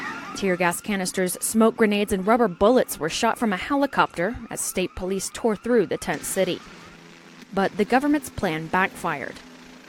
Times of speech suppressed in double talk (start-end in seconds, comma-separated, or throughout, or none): none